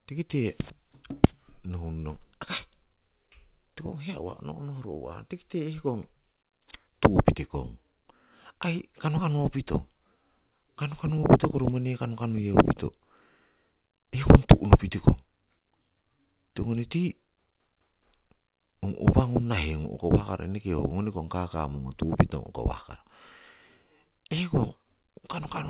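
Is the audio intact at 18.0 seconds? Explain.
Yes, the speech at 18.0 seconds is intact, with no dropout, glitch or distortion, only the telephone-band sound of the call path, with nothing above 4 kHz, which fits G.711 mu-law coding.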